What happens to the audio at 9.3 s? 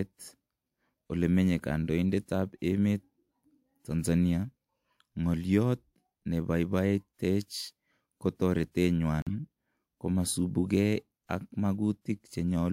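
At 9.22 to 9.31 s a corrupt frame muted dropout cuts the speech to silence. Damaged compressed frames were rejected by the decoder, leaving a flat-line gap with abrupt edges on the waveform and a blank band on the spectrogram.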